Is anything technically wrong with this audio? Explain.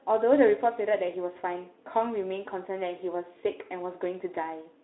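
No, nothing in this speech recording stood out as a technical problem on listening.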